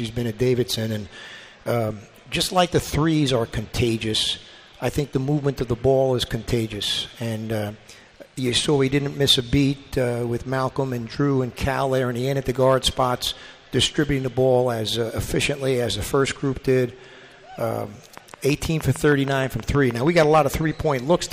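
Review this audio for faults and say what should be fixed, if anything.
A train of clicks runs from 18.18 s to 20.55 s: around fifteen near-identical pulses at a steady 6.35 per second, peaking roughly 10 dB above the surrounding sound, so they tick clearly over the sound, in pauses too. Their uniform shape and metronomic spacing point to a periodic injection, likely electrical interference from nearby equipment or a faulty connection or power supply. To prevent it, isolate the recording chain from interfering devices and check interface connections and drivers before capture.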